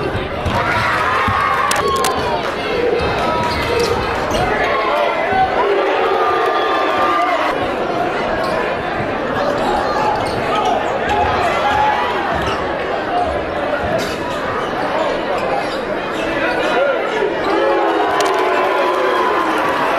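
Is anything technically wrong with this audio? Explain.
Yes. Cable scratch noise appears from 1.70 to 2.15 s and again from 18.20 to 18.43 s. A worn cable or connector being moved is the likely cause: its contact resistance flickers, adding dense, irregular bursts of scratchy rustling over the sound, at roughly 10 dB below the signal.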